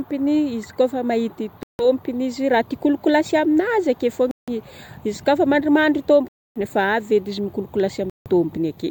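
Four dropouts in this speech clip point to a likely Bluetooth stall each time: radio interference delayed packets, the headphones' buffer emptied, and playback froze until retransmissions arrived. The sound cuts to silence and then resumes where it stopped, at 1.63 s (about 161 ms of silence), 4.31 s (167 ms), 6.28 s (274 ms, the longest) and 8.10 s (161 ms), leaving abrupt holes in the speech.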